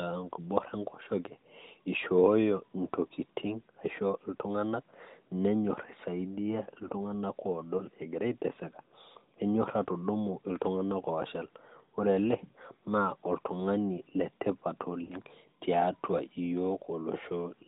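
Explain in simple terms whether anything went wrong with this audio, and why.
Two short dropouts come from lost AMR speech frames on this narrowband phone-codec speech. At 7.78–7.85 s, just before "egira aitaseka", a single 20 ms frame fails and the decoder patches it with a brief dip or warble. At 15.04–15.15 s, about 60 ms goes missing, and the sound smears and fades before returning.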